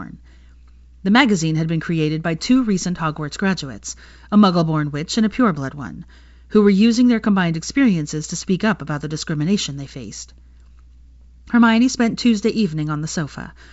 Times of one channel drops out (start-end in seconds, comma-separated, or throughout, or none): none